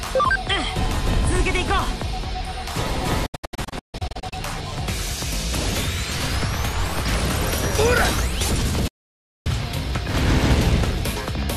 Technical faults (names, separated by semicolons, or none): digital broadcast dropout